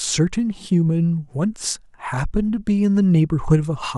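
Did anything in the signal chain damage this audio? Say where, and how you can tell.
No, nothing in this speech recording stood out as damaged on listening.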